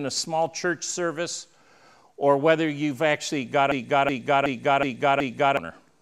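From 3.72 to 5.57 s there's a system hang loop: the machine froze while the hardware kept replaying one 372 ms chunk, which fits a 16384-sample buffer. Five repeats at 2.69 Hz give a slow machine-gun stutter, and around two seconds of sound vanish.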